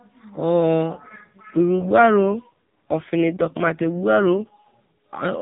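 From 0.94 s to 4.77 s the speech turns rougher and more synthetic, with a buzzy quality, while the band stays the same and the sound never breaks. This is an AMR rate drop. The link appears to have weakened, so the network pushed the AMR narrowband codec from its 12.2 kbps mode down to a rate that fits about 5.9 kbps, giving more bits to error protection and leaving fewer to describe the speech. Throughout, nothing above 4 kHz comes through.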